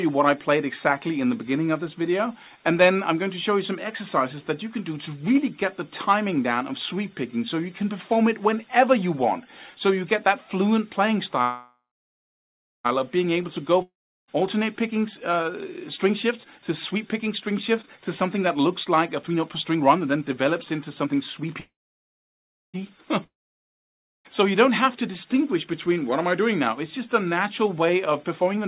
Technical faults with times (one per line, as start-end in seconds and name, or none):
11.42-12.86 call audio freeze
13.82-14.30 long network dropout
16.04-21.55 jitter buffer speed-up
21.60-22.76 call audio freeze
23.24-24.27 long network dropout
24.87-25.67 jitter buffer speed-up
27.93-28.68 jitter buffer speed-up